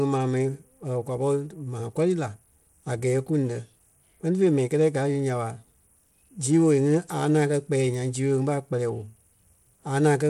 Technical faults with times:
0.00-10.30 Bluetooth SBC compression

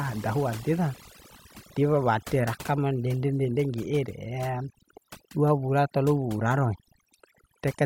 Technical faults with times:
0.00-7.85 overdone noise removal

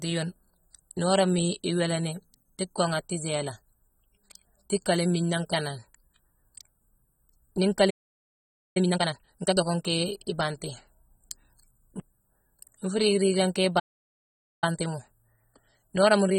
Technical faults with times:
0.00-16.38 AAC compression
7.90-8.77 playback stall
8.77-9.61 time-compressed catch-up
13.79-14.64 playback stall
14.64-16.38 time-compressed catch-up

